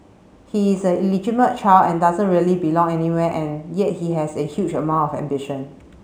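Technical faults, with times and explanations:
Throughout, imaging from linear upsampling. The top of the band sounds dulled, with a faint metallic shimmer on sibilants. Straight-line interpolation left mirrored copies between 8 kHz and 16 kHz, about 40 dB down. This fits a rate raised from 16 kHz to 48 kHz.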